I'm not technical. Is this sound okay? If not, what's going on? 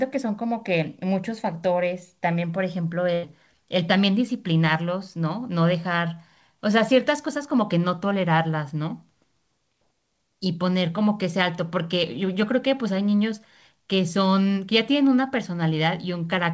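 No. There is one short dropout, a burst of packet loss, from about 3.14 to 3.25 s. The speech traveled over a call connection in small chunks, and a few chunks in a row never arrived in time. The receiving end covered the gap by stretching the last bit of sound for about 90 ms, letting it fade. You may hear a brief buzz or hiss there. Then the speech jumps ahead, with roughly a tenth of a second lost.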